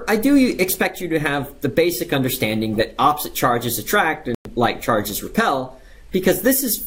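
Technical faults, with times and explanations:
4.35–4.48 s, Bluetooth dropout: the sound cuts to silence for about 0.13 s, then returns further along, as if it had kept playing. This is likely wireless packets arriving too late and being discarded. Unlike a pause or buffer stall, nothing is delayed; the material is simply skipped.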